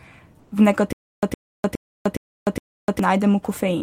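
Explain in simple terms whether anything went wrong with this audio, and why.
From 0.39 to 0.51 s, the sender likely paused transmission during a quiet moment, so the receiver filled in comfort noise in place of the background: a flat, featureless hiss lasting about 120 ms.

From 0.93 to 2.99 s, the stream likely stalled, causing a stutter with silent gaps: a 110 ms fragment replays five times, each followed by about 0.3 s of dead silence, and the speech meant for that stretch is missing.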